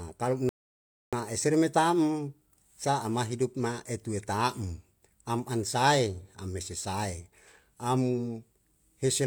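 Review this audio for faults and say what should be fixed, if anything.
A rebuffering stall interrupts the speech from 0.49 s to 1.13 s. Playback ran short of downloaded audio, froze until more data came in, and then picked up exactly where it stopped, just before "eseru me tam sa". Nothing is skipped, but about 0.64 s of dead air is added. On the waveform this is a flat line at zero between two ordinary stretches of signal. On the spectrogram it is a fully blank vertical band with hard edges at both ends.

Preventing it means keeping a larger playback buffer, or lowering the streaming bitrate when the connection slows, so the player never runs out of downloaded audio.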